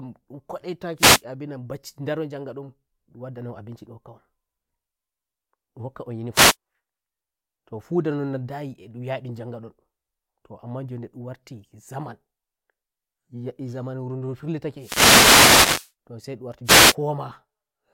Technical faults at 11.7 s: none

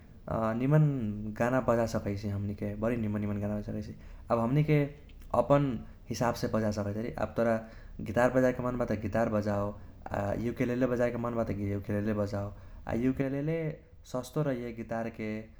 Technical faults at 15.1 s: sudden gain jump

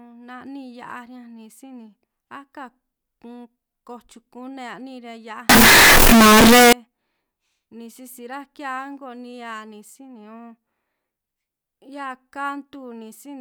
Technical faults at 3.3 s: none

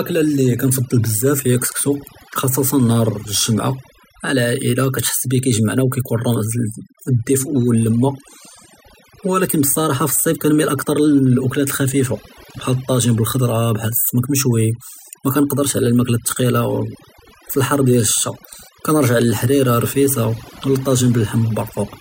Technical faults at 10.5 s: overdone noise removal

